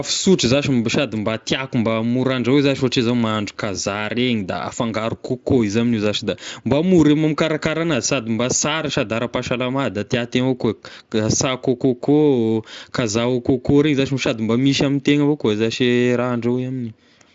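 No technical faults are audible.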